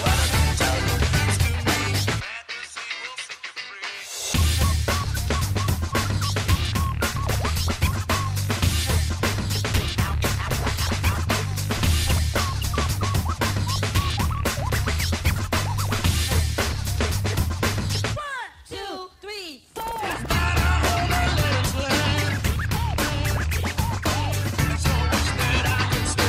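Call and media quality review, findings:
Abrupt forward jump at 9.1 s: about one second of audio missing, the two sides spliced directly with no fill or silence. Skip ahead, stretch dropped in transit or discarded by the receiver jitter buffer on overflow, cutting playout delay by roughly a second.

Hurried, faster playback from 9.73 to 10.15 s at 113% speed, pitch unchanged. Jitter buffer speed-up: receiver trimmed repeated pitch-period-length pieces, around 70 ms in total, to drain excess buffered audio.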